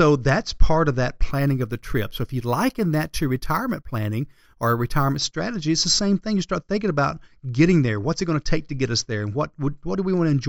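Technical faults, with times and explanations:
1.31 to 5.18 s, imaging from sample-and-hold upsampling: right after "that's part of that" and running up to "strategy it's the same", the speech picks up a bright, metallic fizz that rises and falls with the voice. Each sample was simply held rather than smoothed, so a mirrored copy of the spectrum lands in the 8 to 16 kHz band at about 22 dB below the signal, which fits a 16 kHz source raised to 48 kHz.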